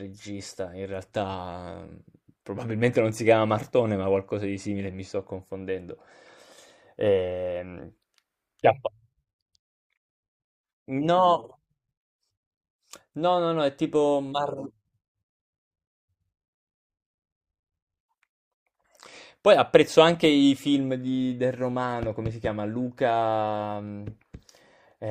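No technical faults can be heard in this speech clip.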